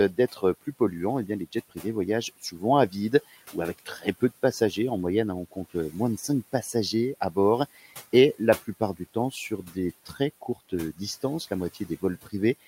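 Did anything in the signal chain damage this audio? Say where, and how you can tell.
Yes, in call processing: speech cut by the noise suppressor at 0.13–0.81, 1.27–1.85, 2.42–4.22 (before "de passagers"), 5.51–5.95, 8.39–11.23 and 11.74–12.33 s. Short bits of speech get misread as noise and pulled down about 13–18 dB along with the room noise, so they sound swallowed.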